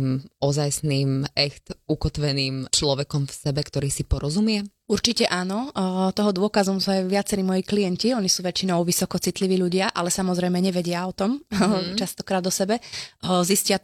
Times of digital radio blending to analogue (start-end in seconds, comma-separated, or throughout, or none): none